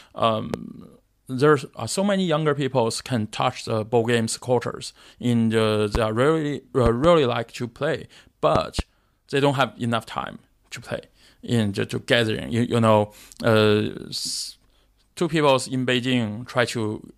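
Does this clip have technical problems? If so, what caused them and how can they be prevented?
Yes. The speech has a loud pop at 0.54–0.57 s and another at 5.95–5.98 s. Double pops occur at 6.86–7.07 s and 8.56–8.82 s. Each peaks around 15 dB above the speech, which carries on underneath. The likely cause is a sudden voltage step or pulse, from a connector, switch or static discharge, entering the signal chain and being shaped by the following circuits into a thump. Securing connectors, not switching equipment while recording and controlling static would prevent it.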